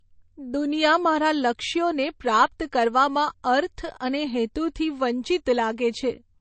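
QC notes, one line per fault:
Throughout, MP3 compression damage is plainly audible in the speech. Nothing is heard above 8.3 kHz, so the treble is cut off as if by a wall. Sibilants sound dull and swirly, with a watery, metallic edge. Faint detail seems to flicker in and out as weak frequency components are dropped from frame to frame. Attacks are smeared. The likely cause is an encoder starved of bits, which fits a bitrate of about 34 kbps.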